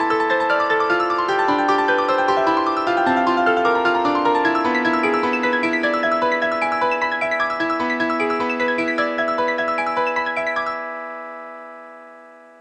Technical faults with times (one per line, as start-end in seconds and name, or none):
none